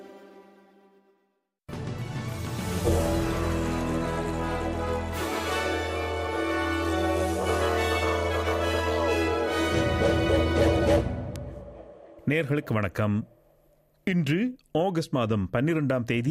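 A single bit error spike sits at 11.36 s, heard as one short, sharp tick that has nothing to do with the surrounding sound. A flipped bit in memory or on a digital link pushed three consecutive samples far off their true value by a power of two before they snapped back, peaking at about -17 dBFS. On a waveform it appears as an isolated needle only a few samples wide. On a spectrogram it shows as a thin vertical line running through the whole frequency range.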